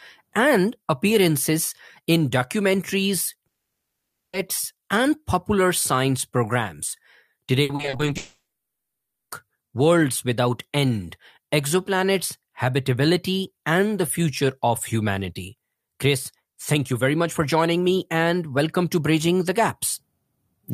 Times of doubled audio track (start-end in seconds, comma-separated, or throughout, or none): none